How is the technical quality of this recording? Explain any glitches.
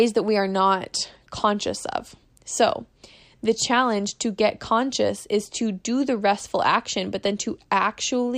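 No technical faults are audible.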